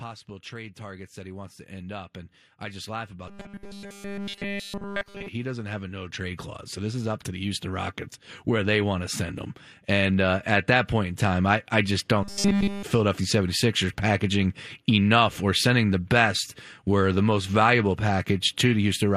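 From 0.49 s to 11.21 s, automatic gain rising lifts the level by about 18 dB, ending just before "I I just". The background swells along with the speech, which marks it as a gain change rather than a talker moving closer.

From 3.28 s to 5.28 s, and again from 12.23 s to 12.84 s right after "I I just", the speech turns into a rigid metallic buzz at 200 Hz, still loosely following the syllables. This is a robotic sound from repeated short buffers, likely caused by a stalled stream whose gaps were filled by looping about 5 ms of audio continuously. A pitch-shift fault would instead move the natural intonation up or down.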